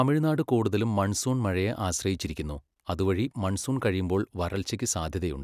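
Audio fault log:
No technical faults can be heard anywhere in the speech recording, and the signal holds steady throughout.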